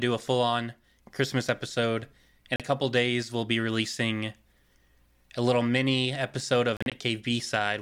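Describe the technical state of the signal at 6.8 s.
Right after "little mini episode of", the speech breaks into short silences from 6.77 to 6.92 s, the longest about 37 ms, resuming as if it had played on: likely a Bluetooth dropout from late packets.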